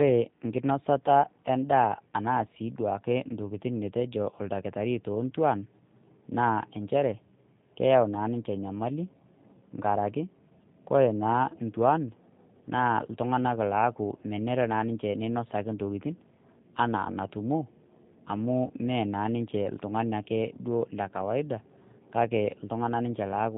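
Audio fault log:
throughout G.729 codec: The speech is plainly rough and faintly synthetic, and nothing above 4 kHz survives, which fits an 8 kbit/s G.729A stream. The coder rebuilds each 10 ms frame from a vocal tract filter, a pitch predictor and a few pulses rather than sending the waveform itself. The buzzy, slightly metallic grain this leaves on voiced sounds sets it apart from a plain low-pass filter, which dulls the sound without roughening it.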